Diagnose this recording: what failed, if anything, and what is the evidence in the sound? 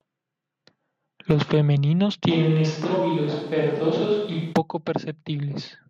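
The close microphone's feed likely dropped out at the analogue wiring stage, forcing a switch to a distant microphone. From 2.32 s to 4.52 s the speech turns suddenly roomy and thin, about 5 dB quieter, with room noise rising to roughly 35 dB below it.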